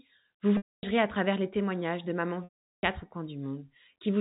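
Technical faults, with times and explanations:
0.57 to 0.83 s and 2.44 to 2.83 s, packet loss with pitch repetition. About 260 ms of audio drops out in the first gap, and about 390 ms in the second. To bridge each gap, the receiver repeats the last pitch period. This gives a brief held, buzzy tone that fades out over about 50 ms. Silence follows until the speech returns with a short cross-fade, still limited to the narrow telephone band of G.711 coding.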